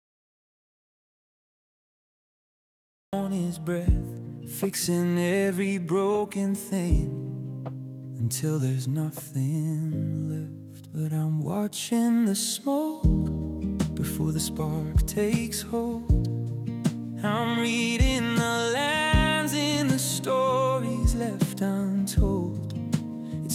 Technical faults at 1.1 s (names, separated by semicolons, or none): audio dropout to silence